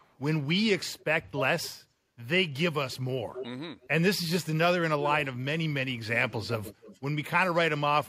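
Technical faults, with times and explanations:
0.0–0.16 s, 0.98–1.04 s, 3.35–3.48 s, 3.81–3.88 s and 6.14–7.0 s, echo leak: a delayed copy of the speech trails the voice by roughly 270 to 290 ms, drifting later over the clip. It is quietest early on, about 30 to 35 dB down, and loudest near 3.4 s, about 10 dB down. It is likely from a far-end loudspeaker whose echo canceller let residue through. On a spectrogram, the same harmonic patterns reappear shifted right by that delay, dimmer.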